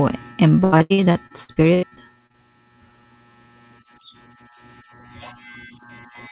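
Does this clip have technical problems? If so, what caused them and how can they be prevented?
Yes, there's repeated packet loss (robotic sound) from 0.64 to 2.36 s: a dozen or so holes, the longest 84 ms, each patched by stretching the previous sound, so it turns choppy with pieces missing. Heard through narrowband call audio with nothing above 4 kHz, which fits G.711. A steadier network link or a deeper jitter buffer would prevent it.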